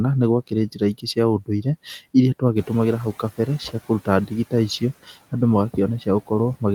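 A speech clip with three instances of speech cut by the noise suppressor, at 0.74 to 1.17 s, 1.4 to 1.66 s and 3.69 to 4.08 s. The suppressor treats fragments of speech as noise and pulls them down with the background by up to about 13, 18 and 16 dB, so short stretches of around 100 to 150 ms sound swallowed or faint. Around 2.5 s the room noise, which is part of the recording, rises by about 11 dB, and the noise suppressor is heard catching up from 2.56 to 3.24 s. Its noise estimate trails the new level, so the louder background comes through under-suppressed at first and then sinks by about 10 dB over roughly 680 ms as the estimate adapts.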